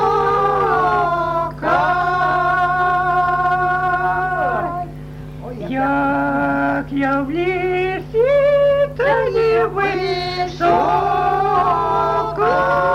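No technical faults can be heard anywhere in the audio.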